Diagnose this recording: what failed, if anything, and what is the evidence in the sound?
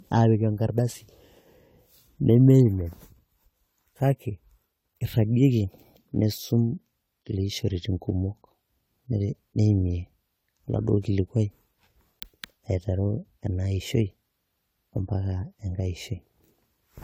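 Generation loss runs throughout the speech, at the codec stage. The sound is swirly and hollow, with smeared consonant attacks and nothing above 19.9 kHz, which fits a 64 kbit/s AAC-LC chain likely re-encoded about four times. Each pass requantised on a shifted frame grid, so noise and spectral holes accumulated.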